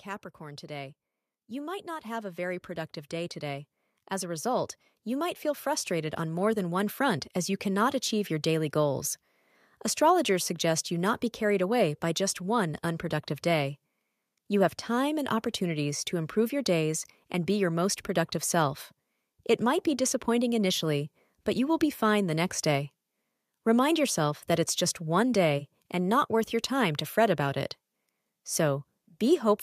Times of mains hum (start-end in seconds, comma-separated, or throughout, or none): none